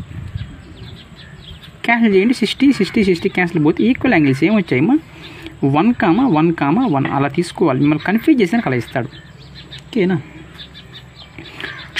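No technical faults can be heard anywhere in this audio.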